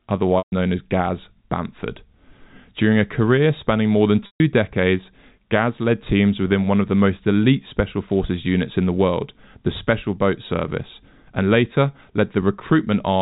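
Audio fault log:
0.38–0.52 s and 4.26–4.40 s: packet loss with pitch repetition. Each 140 ms gap, which fits about seven lost packets, repeats the last pitch period and fades it over roughly 50 ms. A buzzy hold sinks into silence, then speech cross-fades back. Waveforms show identical shrinking cycles, and spectrograms show frozen harmonic stripes fading to a blank band.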